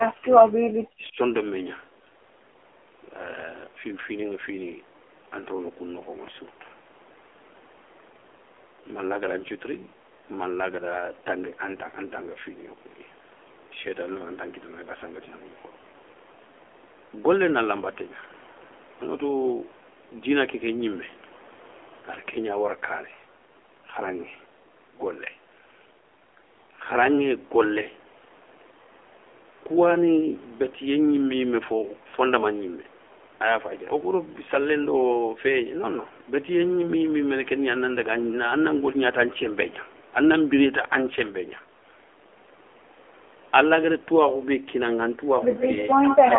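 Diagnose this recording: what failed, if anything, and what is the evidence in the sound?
The codec stage is at fault: the speech went through the AMR narrowband mobile codec at 7.4 kbps, which models the vocal tract from sparse pulses. Nothing above 3.5 kHz survives, the band sits around 300 Hz to 3.4 kHz, and the voice sounds plainly buzzy and synthetic throughout.

Call processing most likely suppressed speech in double talk. When the echo canceller cannot tell the near talker from loudspeaker echo, it attenuates both. The speech drops by roughly 40 dB across the opening second, 0.0 to 1.17 s, and by about 30 dB from 46.0 to 46.3 s.

An echo leak is also heard, likely from a loudspeaker-side echo canceller letting residual pickup return. A delayed copy of the speech trails by 134 ms, about 15 dB down from 45.58 to 45.87 s, then about 10 dB down from 46.09 to 46.17 s.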